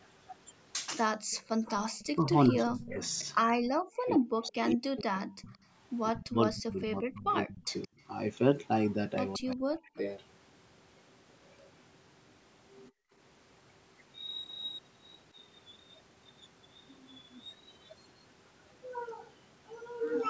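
From 0.01 to 5.58 s a faint delayed copy of the speech trails the direct sound by 175 ms, sitting roughly 20 dB below it. This is an echo leak, likely from a far end on loudspeaker whose echo canceller let part of the microphone pickup through and sent it back. On a spectrogram the harmonic bands appear twice, the fainter set offset by 175 ms. A shorter, weaker burst of the same echo, around 25 dB down, returns at 7.68 to 7.88 s.

Overlapping this, from 1.28 to 7.91 s, the speech repeatedly dips and drops out in pieces, adding up to about four seconds, with the deepest cuts near 40 dB. This is speech suppressed in double talk, likely the canceller failing to tell its own talker from the loudspeaker echo while both were active and attenuating everything. The waveform shows the envelope collapsing in notches, and the spectrogram shows energy thinning and losing the upper bands. A further half-second of the same suppression, likely the same cause, hits 9.38 to 9.98 s.

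At 12.9 to 13.13 s the room background drops by about 33 dB for roughly 200 ms, then comes back. This is background gated by the echo canceller, which clamped the microphone hard while the loudspeaker was playing. The noise floor on a spectrogram shows a brief vertical gap, and the waveform flattens to near-silence across that window.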